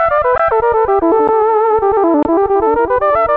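At 0.38 s a block of digital silence lasting about 17 ms cuts in. The output buffer was probably not filled in time, so samples drop straight to zero and return with no fade. The hard edges set it apart from a skip, where nothing goes quiet.

At 1.12 to 1.14 s the audio skips ahead. Roughly 0.7 s of material was discarded while later audio was already queued, and the two sides are butted together with no gap. The result is an abrupt jump in content rather than a hole.

At 1.28 s a shorter block of digital silence, about 12 ms, lands as a single tick. Its length fits a 512-sample buffer going unfilled. The full drop to zero separates it from codec roughness, which in this G.722 path means coding noise and the loss of everything above 8 kHz.

From 1.69 to 2.09 s a jitter buffer speed-up runs the audio at 110% by cutting out short pitch-period slices, around 50 ms in total. The sound seems hurried but its pitch stays put, which is what separates it from resampling. 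There is no single jump, as there would be with a skip.

At 2.23 to 2.25 s a third block of digital silence, about 23 ms long and consistent with a 1024-sample buffer, is long enough to register as a brief hole rather than as one tick.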